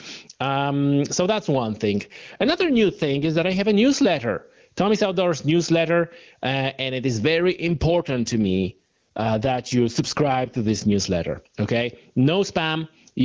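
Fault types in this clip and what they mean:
Gain pumping: The level swings by roughly 15 dB throughout. This points to a fast limiter or compressor repeatedly pulling down a gain set far too high for the microphone, which is the likely cause. Loud and quiet passages sit unnaturally close in level, and the speech sounds squashed.
AMR rate drop: From 1.95 to 3.6 s and again from 7.39 to 10.95 s, the AMR-WB stream falls from 23.85 to 8.85 kbit/s, as happens when a weak radio link makes the network trade speech bits for error protection. The bandwidth stays the same and nothing drops out, but the speech turns rougher and more synthetic during both stretches, then clears once the rate returns to 23.85 kbit/s.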